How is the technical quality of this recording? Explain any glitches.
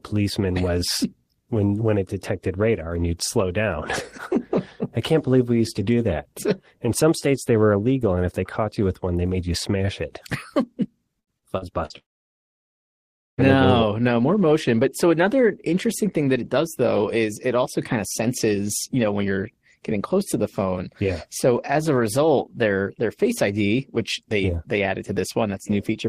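Two network faults in succession degrade the speech around 11 to 13 seconds.

From 11.19 to 11.93 s, repeated packet loss (robotic sound): four gaps, the longest 73 ms, were patched by repeating audio. The result sounds choppy, with pieces missing, and shows smeared, striped spectrogram patches.

From 11.98 to 13.41 s, a long network dropout, likely from lost packets, leaves a brief fading buzz and then about 1.4 s of flat silence. Speech resumes at "no no more motion."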